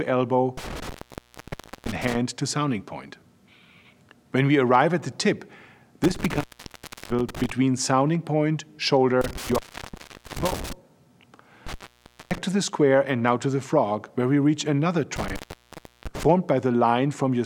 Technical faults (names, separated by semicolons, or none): intermittent contact